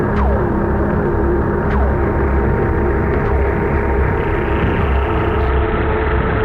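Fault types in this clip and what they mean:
Bluetooth SBC bit pool drop: From 5.49 s to the end of the clip, the treble goes dull and a gritty, grainy noise creeps in. That's the Bluetooth link getting squeezed so the sender cuts the SBC bit budget. The top sub-bands get starved and the rest are quantised coarsely. The sound fits a bit pool falling from around 28 to about 5, roughly 54 kbps, and it never recovers before the clip ends.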